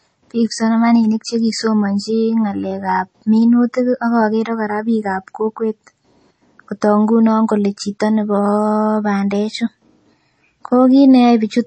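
From start to finish the speech carries plainly audible MP3 compression damage, likely from an encoder starved of bits, at a level that fits a rate around 32 kbps. Nothing is left above 8.4 kHz, so the treble stops at a hard ceiling, and weak detail below it flickers in and out between frames, giving a watery, swirling texture with chirpy sibilants and smeared onsets. A simple low-pass filter would dull the top just the same but leave no swirl.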